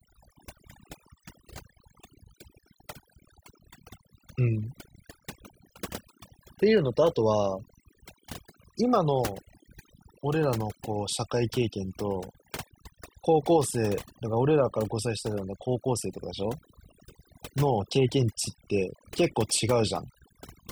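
Throughout, overdone noise removal leaves twinkling specks in near-silent gaps, unlike a noise gate, which mutes whole pauses cleanly.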